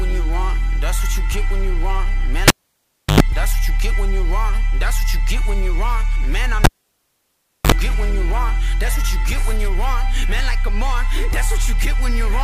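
The cable was pulled and plugged in twice. At 2.48 s a pop cuts the sound for about 0.68 s. A 93 ms burst of 50 Hz mains buzz follows, then another pop at 3.20 s. At 6.64 s it happens again, with 1.03 s of near silence and 49 ms of buzz before 7.72 s.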